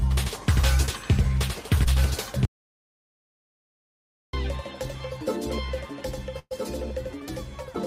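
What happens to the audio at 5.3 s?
At 5.3 s, as throughout the clip, a doubled audio track is heard. A second full-band copy trails the original by about one and a half seconds, roughly 5 dB quieter, with no decay or room colour. It likely comes from a second, slower capture path.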